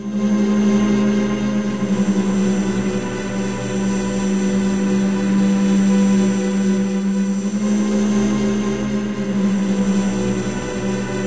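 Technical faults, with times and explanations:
Nothing stood out on listening; the sound comes through the call path as expected, with no audible problems at any point.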